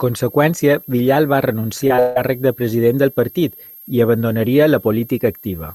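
A switching supply whistle runs throughout, a thin tone wandering between about 12.5 and 12.7 kHz, roughly 25 dB below the speech, drifting rather than holding one steady pitch like a fixed interference tone. At 1.87 to 1.92 s and 1.96 to 2.00 s, short concealed packet loss leaves brief smears where about 20 ms each went missing and was patched by extending the preceding sound. From 2.00 to 2.18 s, just before "càrrec de president del", a longer gap of about 160 ms is bridged by a fading continuation of the last sound with no true silence, likely a long network dropout rather than another brief concealed loss.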